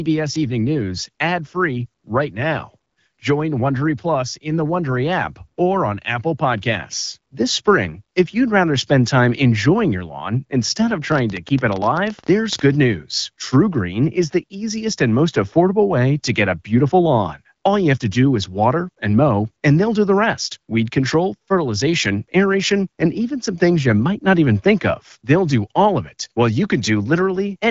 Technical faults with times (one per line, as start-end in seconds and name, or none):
11.12-12.60 train of clicks